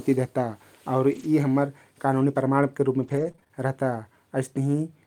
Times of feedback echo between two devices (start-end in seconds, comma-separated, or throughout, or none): none